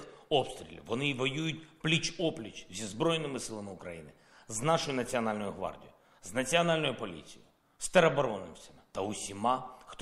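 No technical faults can be heard anywhere in it.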